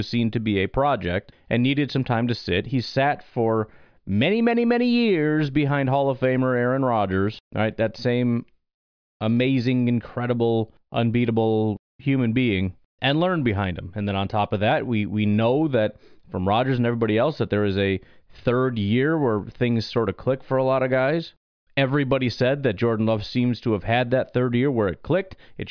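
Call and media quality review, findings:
No findings to report for this call and media quality review.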